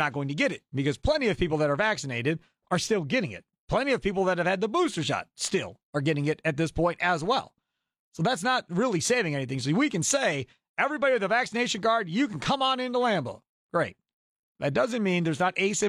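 Listening to this speech recording, nothing stood out as a technical problem at any point.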